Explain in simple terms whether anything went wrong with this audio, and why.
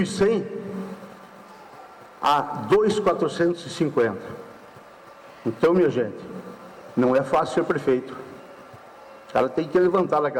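Nothing went wrong with this audio, because nothing anywhere in it sounds broken or out of place.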